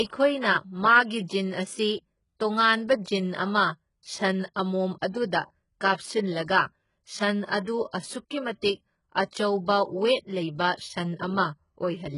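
HE-AAC compression runs through the whole clip and is the likely cause of the heavily degraded speech. The treble is rebuilt from copied lower bands rather than coded, so s sounds turn gritty and metallic, which fits a bitrate near 12 kbps.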